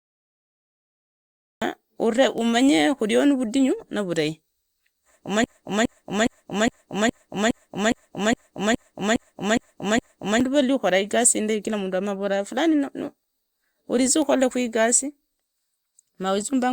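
Speech that begins with a cut-off start: the first 1.62 s are digital silence, and at 1.62 s the audio jumps straight into the middle of a sound just before "umanye khurio ni". There is no rising attack or fade, which sets it apart from a quiet lead-in or a soft onset. What is heard points to recording or streaming that began late. From 5.44 to 10.41 s there is a broken-record loop. A 0.41 s fragment plays 12 times back to back, each repeat identical, until normal speech resumes at "valli ukhora igasi indai". Unlike an echo or a natural stammer, nothing decays or varies between repeats, and the speech that belonged in those five seconds never arrives. That points to a likely stall in the player, encoder or stream that kept resending its last buffered piece.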